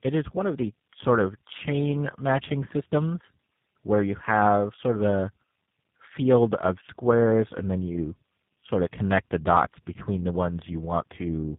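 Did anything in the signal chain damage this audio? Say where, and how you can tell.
Yes. Throughout, the speech is rough, muffled and warbly, with nothing above 3.7 kHz. This is tandem speech coding at the codec stage, where a second low-rate codec re-encodes the first's degraded output.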